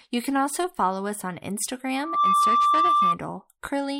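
After "also follow us on", a 1.2 kHz squeal swells from 1.95 s to about 10 dB above the speech, lasting until 3.18 s. This is loudspeaker feedback squeal, from the microphone picking up its own loudspeaker.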